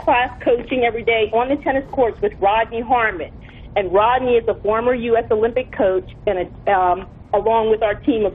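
At 6.23 to 6.27 s the sound jumps abruptly forward with a short blip at the join, so part of the programme is simply gone. This is likely a stream segment skipped: one chunk failed to load and playback resumed from the next.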